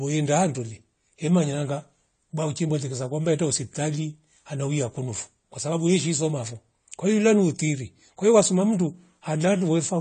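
From start to finish the speech sounds dull, with nothing above 9 kHz and plainly audible smearing and fizz. That's likely AAC compression, with AAC-LC starving its bands at a rate that points to about 32 kbps, so the top end gets cut away.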